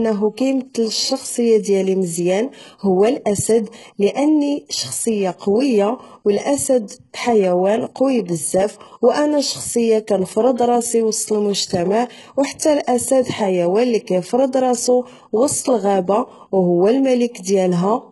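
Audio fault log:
Throughout: HE-AAC compression, likely the cause of the thin, synthetic treble across the whole speech clip. The damage is heavy. Content stops entirely above about 11.5 kHz, and the upper band that remains sounds copied up from lower frequencies rather than captured, so its harmonics sit out of step with the lower range. S sounds come out gritty and lisping. The overall character points to a very low bitrate, around 12 kbps.
13.22–13.26 s: pre-echo. A short hiss runs for about 36 ms just ahead of a sharp onset, and the attack itself lands soft and smeared. The codec spreads its quantisation noise across the whole transform block, so the noise sized for the loud attack leaks backward into the quiet stretch before it, where nothing masks it.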